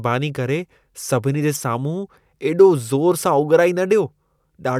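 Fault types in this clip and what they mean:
Corrupt frame decoded: damaged bits in a few compressed frames were decoded anyway, so misread gains and codes put energy at frequencies unrelated to the speech. Just after "करे सभिनी जे", from 1.54 to 1.61 s, a short harsh burst, peaking around -10 dBFS, cuts across the speech. A lost or concealed frame would leave a gap or a smeared repeat of the preceding sound. Here a loud, foreign-sounding burst replaces the speech.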